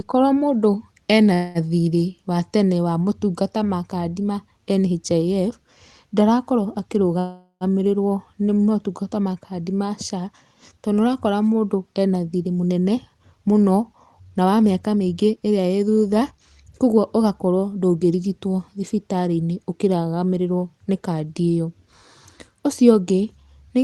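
Delayed packets likely drained the jitter buffer at 1.33 to 1.58 s, between "mũndũ ena" and "thirĩ wa tene wa". This call audio freeze stretches the last sound into a fading buzz or hiss for about 0.2 s, then speech resumes intact. A longer stall at 7.19 to 7.64 s fills about 0.4 s, ending in roughly 80 ms of silence.

From 12.47 to 18.13 s the jitter buffer held excess audio and trimmed pitch-period slices repeatedly to shed around 0.7 s. This jitter buffer speed-up plays the speech at about 111% speed with unchanged pitch, so it sounds hurried.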